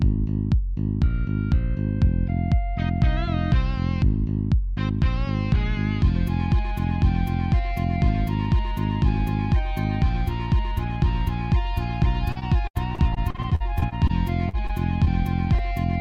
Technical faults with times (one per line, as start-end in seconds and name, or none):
12.31-14.11 repeated packet loss (robotic sound)
14.49-14.71 short concealed packet loss
15.05-15.08 short concealed packet loss